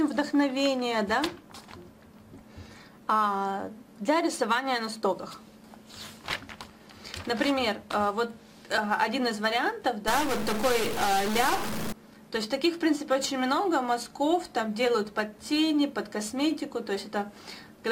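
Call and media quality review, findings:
Stuck bit, 10.08–11.92 s: harsh buzzy distortion, quiet stretches filled with noise. Waveform shows values offset by a fixed step around -30 dBFS; spectrogram shows broadband smear. Likely a data line or converter bit held at 0 or 1.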